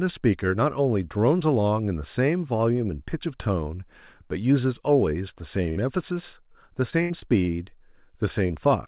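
Burst of packet loss at 5.70 to 5.78 s: a run of packets went missing, so the receiver held the last sound for about 60 ms, letting it fade like a stretched buzz or hiss, then picked up again with roughly 60 ms of speech skipped.

Repeated packet loss (robotic sound) from 6.52 to 7.50 s: five separate holes, the longest 77 ms, were each patched by extending the preceding sound. About 18% of this stretch is synthetic fill, giving a choppy texture with fragments of speech missing.

Short concealed packet loss at 8.48 to 8.51 s: about 20 ms never arrived in time, and the decoder bridged it by continuing the previous sound before blending back in. The result is a brief smear or wobble where a short sound may drop out.

The call path itself has nothing above 4 kHz, which fits a narrowband G.711-type codec.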